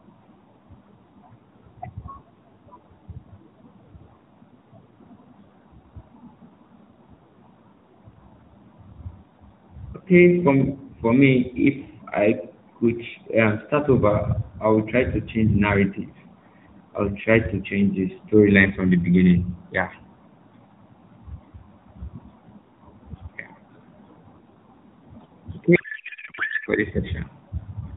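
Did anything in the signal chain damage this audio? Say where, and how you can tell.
Yes, at the codec stage: from 25.76 to 26.68 s the speech turns into garbled noise and warble that barely tracks it. That's a codec payload misread, with the narrowband AMR frames most likely packed octet-aligned but unpacked as bandwidth-efficient, so every field lands in the wrong place.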